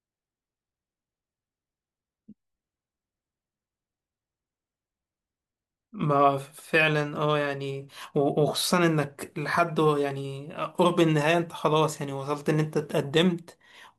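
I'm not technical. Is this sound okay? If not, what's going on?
Yes, I listened through this recording and nothing stood out as a problem.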